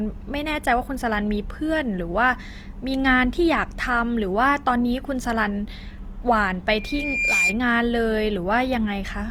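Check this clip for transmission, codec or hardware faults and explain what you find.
Two faults are present: codec damage across the whole speech clip, and a feedback squeal near the end.

Throughout, the speech sounds plainly grainy and rough, though full bandwidth reaching about 20 kHz is kept. This is likely Opus compression in CELT mode, at a rate that fits about 24 kbps.

From 6.72 to 7.58 s, a steady 2.4 kHz tone swells over roughly 0.7 s to about 5 dB above the speech. This is loudspeaker feedback squeal: the microphone re-amplifies its own loudspeaker until that frequency runs away.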